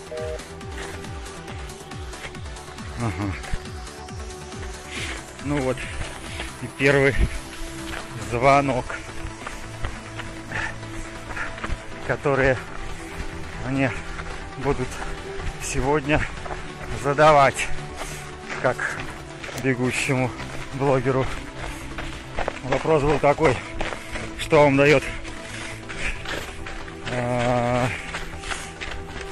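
No technical faults detected.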